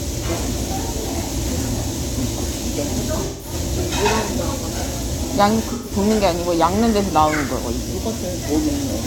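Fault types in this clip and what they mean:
AAC frame loss with concealment: the decoder lost chunks of the compressed stream and filled each gap by reusing the last good spectrum, so the sound turns briefly smeared and noisy, around 3.25 to 3.53 s and 5.72 to 5.92 s. The gaps last about 170 ms and 128 ms, which fits four and three AAC frames. Unlike a plain dropout, neither gap falls silent. The audio keeps going as a blurred, phasey continuation of what came before.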